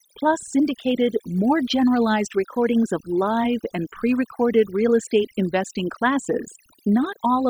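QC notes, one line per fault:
Throughout: overdone noise removal. The noise reduction is set far too aggressively, so any frequency band that sits near the estimated noise floor gets pulled right down or switched off. The low-level parts of the speech fall under that threshold along with the noise, leaving a background of near silence scattered with twinkling, chirpy specks where isolated bands flicker on and off.
2.24–2.85 s: drift correction step. For about 0.6 s, just before "of live and pre", the playback rate jumps up by 5.34 %, so speed and pitch rise together by 90 cents, close to a semitone, and then snap back to normal. The abrupt onset and release of the detuning, rather than a gradual wander, likely comes from clock-matching software changing the resampling ratio in a single step to drain or refill its buffer.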